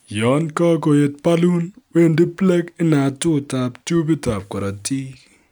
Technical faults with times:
none

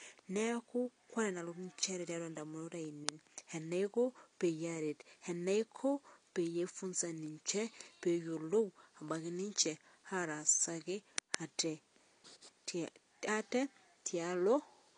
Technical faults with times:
0.00-14.97 AAC compression

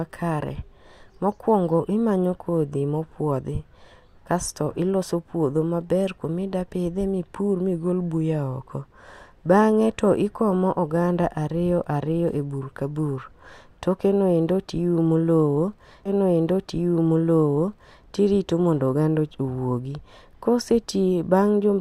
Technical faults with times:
16.05-18.05 stream segment repeated

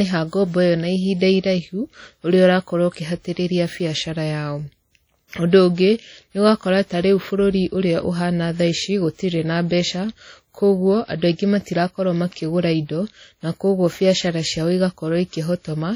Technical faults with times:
0.00-15.95 WMA compression
5.28-5.32 pre-echo

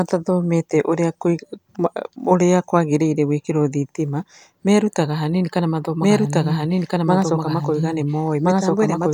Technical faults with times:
6.00-9.13 doubled audio track

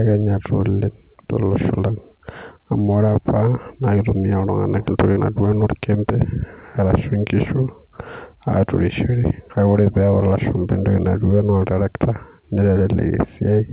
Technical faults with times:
5.12-5.18 short concealed packet loss

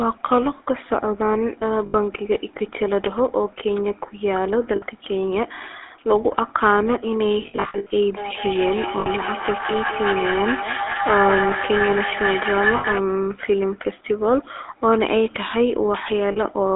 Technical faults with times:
0.00-16.75 GSM full-rate codec
1.86-1.95 lost GSM frames
4.76-4.84 lost GSM frames
7.42-7.91 lost GSM frames
8.17-13.07 feedback howl
9.00-9.07 lost GSM frames
12.76-12.86 lost GSM frames
16.32-16.38 lost GSM frames

